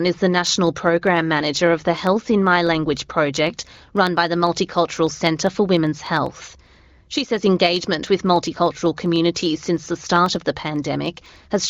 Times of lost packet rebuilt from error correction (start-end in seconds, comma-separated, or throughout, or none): none